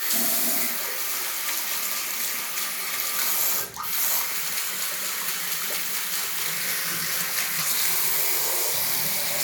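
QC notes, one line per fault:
No faults heard anywhere in this audio.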